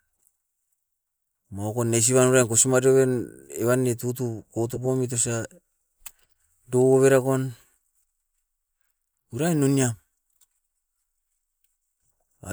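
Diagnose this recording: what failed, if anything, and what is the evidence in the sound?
Nothing failed here: the speech comes through steadily the whole way, with no point where any stage of the chain gives itself away.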